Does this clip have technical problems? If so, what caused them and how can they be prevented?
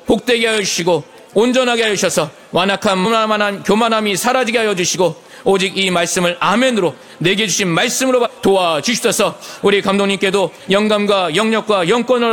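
Yes, there's damaged data in a compressed stream: short glitchy blips at 3.04 s and 8.25–8.27 s, where corrupted frames throw the decoder off sync. Keep checksummed transfers and error-checked storage to prevent it.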